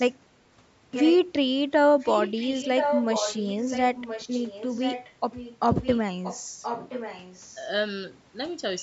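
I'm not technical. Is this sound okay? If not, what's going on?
No. There's an echo leak at 0.1–0.19, 0.92–1.16, 2.0–5.13 (loudest), 5.32–5.57, 5.74–6.01, 6.23–6.44 and 6.62–7.56 seconds: a repeat of the speech arriving about one second late. Likely someone's speakerphone sent its own sound back, and echo cancelling missed it.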